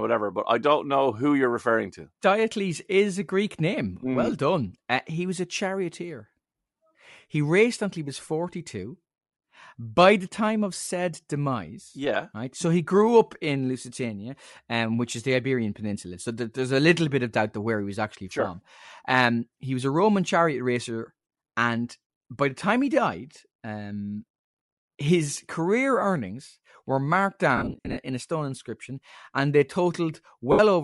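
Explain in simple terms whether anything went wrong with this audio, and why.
Throughout, the speech has a breathy, grainy edge, with the crisp top end replaced by a hiss-like wash. That points to Bluetooth LC3 compression, which likely squeezed the sound hard, dropping much of the high detail and filling the gap with noise.

There are also brief smeary dropouts from lost LE Audio frames. The receiver patched the missing pieces by guessing. One comes at 10.84 to 10.87 s, just after "by the time of". Another is a cluster of short gaps spread from 27.57 to 27.97 s, the longest about a twentieth of a second, between "career earnings were marked" and "in a stone inscription". The last is at 30.52 to 30.60 s.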